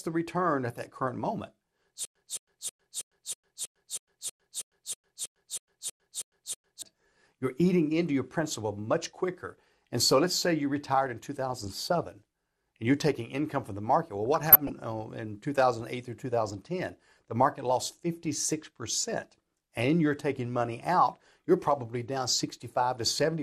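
Throughout, the speech sounds dull and gurgling, with a granular roughness and upper bands flickering in and out. That is the mark of MP2 compression at a low rate, likely around 80 kbps. Unlike MP3 swirl or pre-echo, the damage comes in coarse, fixed sub-band steps.

From 2.05 to 6.82 s, right after "at that current moment", a stutter with silent gaps takes over. A 0.22 s fragment replays 15 times, each followed by 0.10 s of digital silence, on a steady 0.32 s cycle. This is likely a stalled stream retrying its last chunk. Unlike a dropout with noise or a disc skip, the gaps are true silence and the missing audio is simply lost before "you're eating into your".

From 14.34 to 14.70 s, just before "uh in", DAB burbling breaks through. Bit errors that get past error correction corrupt samples and scale factors, so single sub-bands get short blips of noise and jump in level for up to a frame. 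This fits roughly twenty damaged frames at a bit error rate near a fifth of a percent. Unlike the constant codec dullness, it is a brief burst.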